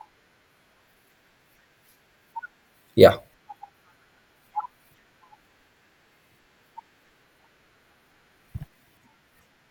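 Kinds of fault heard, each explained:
Drift correction step, 0.80 to 2.71 s: for about 1.9 s the speech runs 6.2% faster and rises 104 cents, roughly a semitone, with speed and pitch moving together, then returns to its normal rate and pitch. The likely cause is clock-matching software that altered the playback rate in a single jump to rebalance its buffer between two clocks, then restored it.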